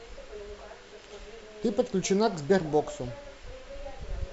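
Nothing stood out as a technical fault on listening to the speech.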